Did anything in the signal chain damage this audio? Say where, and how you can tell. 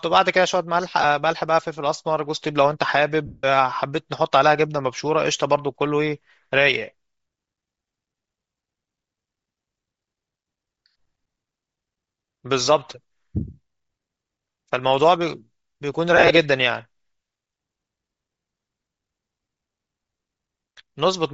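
Yes. The codec stage damaged it throughout: the speech has a breathy, grainy top end, with the upper band replaced by hiss-like filler rather than real detail, and the degradation is plainly audible. That is likely Bluetooth LC3 compression. At a low bitrate the encoder zeroes much of the high spectrum and the decoder fills it with noise. The texture points to roughly 32 kbps with short 7.5 ms frames.

The wireless link also dropped audio, causing lost LE Audio frames. At 1.02 to 1.04 s there is a brief 22.5 ms blur, which fits about three frames. At 3.25 to 3.44 s a 180 ms stretch smears into noise and sags in level. At 16.17 to 16.31 s several short dropouts are scattered across about 135 ms, the longest around 40 ms. In each gap the decoder repeats the last spectrum with randomised phase and fades it over time.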